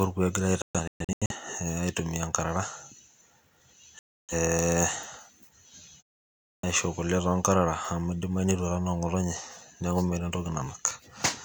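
At 6.5 s, a clipped start after a pause: following roughly half a second of silence, the output wakes late, swallowing about 133 ms, so speech begins abruptly.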